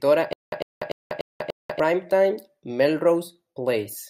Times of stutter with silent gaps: 0.33-1.80

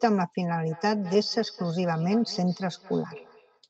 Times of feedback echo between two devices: 0.65-3.65

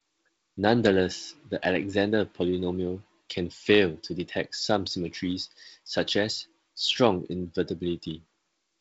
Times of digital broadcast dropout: none

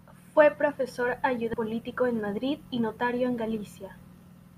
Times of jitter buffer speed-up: 1.73-3.13

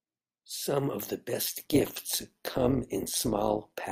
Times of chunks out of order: none

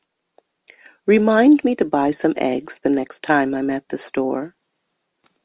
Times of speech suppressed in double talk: none

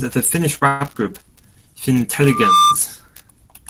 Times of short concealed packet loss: none

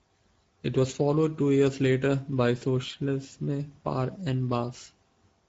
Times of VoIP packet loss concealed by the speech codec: 2.57-2.62

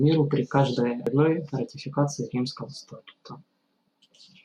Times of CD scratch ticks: none

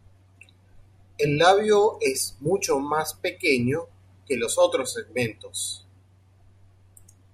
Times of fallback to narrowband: none

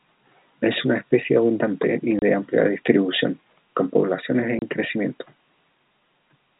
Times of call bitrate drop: none

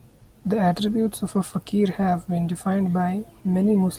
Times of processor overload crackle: none

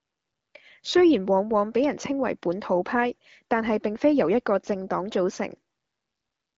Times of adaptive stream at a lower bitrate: none

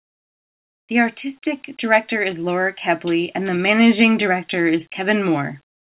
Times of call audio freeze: none

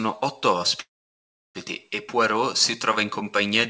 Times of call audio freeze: 0.80-1.58

